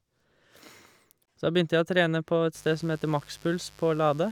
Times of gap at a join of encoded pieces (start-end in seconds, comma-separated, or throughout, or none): 1.25-1.28